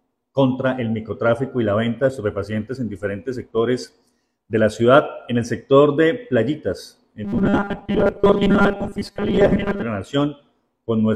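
From 7.25 s to 9.83 s, new audio was likely arriving too seldom, so playback kept looping a short buffer of about 5 ms in place of the missing material, and most of the real audio in that span was skipped. This is robotic sound from repeated short buffers. The repetition stamps a fixed 200 Hz pitch onto the sound, turning it into a rigid, metallic buzz that only loosely tracks the original until the stretch ends.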